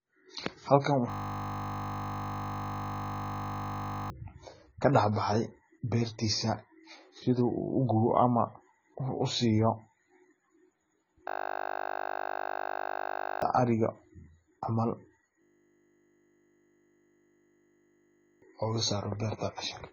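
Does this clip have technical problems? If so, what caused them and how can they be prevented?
Yes. The speech has nothing above 7 kHz throughout and sounds dull and smeared, with a fizzy, warbling edge on sibilants. That's likely AAC compression at a very low bitrate, around 16 kbps. Encoding at a higher bitrate would avoid it.

There's also a system hang loop three times: 1.1 to 4.1 s, 11.28 to 13.42 s, and 15.42 to 18.42 s. Each time a 20 ms slice repeats, giving a steady 50 Hz buzz, and roughly two to three seconds of audio are lost. Keeping the machine and audio driver from stalling would prevent it.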